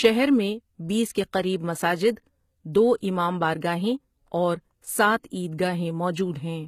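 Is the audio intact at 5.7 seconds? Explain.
No, at 5.7 s the speech carries the same HE-AAC compression heard throughout the clip: plainly gritty, metallic s sounds, because the treble is likely rebuilt by band replication from lower bands rather than coded. Nothing sits above about 14.9 kHz, which fits a roughly 20 kbps stream.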